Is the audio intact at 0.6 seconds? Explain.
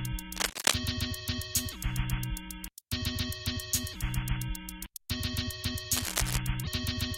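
No. From 0.36 to 0.78 s, cable scratch noise covers the sound: dense, uneven scratching bursts, roughly 5 dB louder than the signal, likely from a worn connector's fluctuating contact resistance.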